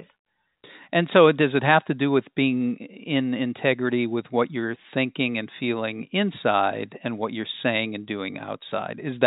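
Nothing's wrong with this bit of speech; it just carries the narrow, top-trimmed sound of ordinary G.711 telephone coding, with nothing above 4 kHz, exactly as a fixed phone line would deliver it.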